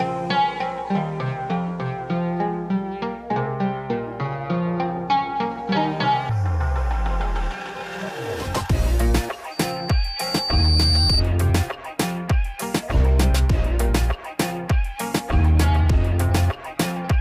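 At 9.51 s a loudspeaker feedback squeal begins. The microphone is picking up its own loudspeaker, and at 4.6 kHz the loop gain passes one. A single piercing tone swells over about a second and a half. It ends around 11.23 s, rising to roughly 5 dB above the sound.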